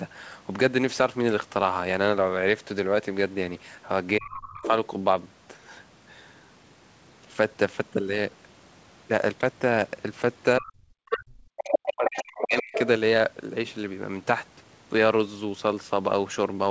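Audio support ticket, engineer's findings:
Speech suppressed in double talk: talker's voice dips and drops out at 4.19–4.62, 10.59–10.70, 11.09–11.47 and 11.79–12.73 s, deepest about 25 to 40 dB down. Likely echo canceller unable to split near talker from loudspeaker echo, attenuating both.

Other side's voice leaking through: second voice audible at 4.62–4.69, 11.11–11.17, 11.57–11.79 and 12.06–12.80 s, from roughly 10 dB below the talker up to level with it. Likely residual loudspeaker echo reaching the mic past the echo canceller.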